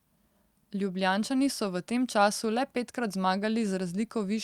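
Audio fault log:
No faults are audible in this speech recording.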